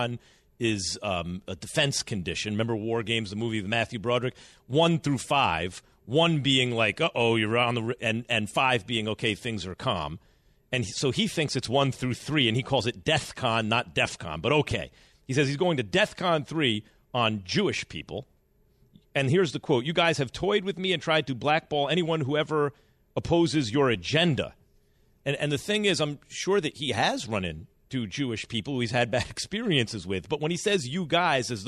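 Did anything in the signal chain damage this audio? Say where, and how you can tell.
Yes. A single loud pop sits at 14.71 to 14.74 s, a short, sharp transient peaking a few decibels above the surrounding speech, with the talking continuing uninterrupted beneath it. The likely stage is the analogue wiring: a voltage step from a connector being disturbed, a switch or a static discharge was summed into the signal, and the following circuitry shaped it into a brief thump lasting roughly 30 ms rather than removing any audio.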